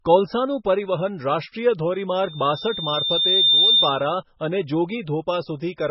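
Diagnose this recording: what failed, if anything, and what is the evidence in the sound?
Heavily watery, swirly speech throughout, with nothing above 5.6 kHz, points to the codec stage: likely MP3 compression at a bitrate near 16 kbps.

A 3.6 kHz tone swells from 2.22 s to 4.11 s, about 10 dB over the speech: loudspeaker feedback squeal, microphone-loudspeaker loop gain exceeding one.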